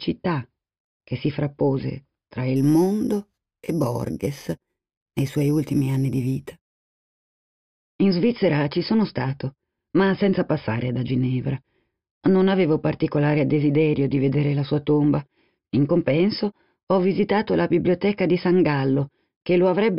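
Imaging from sample-and-hold upsampling, 2.56 to 7.16 s: repeated, unsmoothed samples mirror the spectrum, adding a metallic fizz about 25 dB down from 5.5 kHz, which points to an 11 kHz original rate.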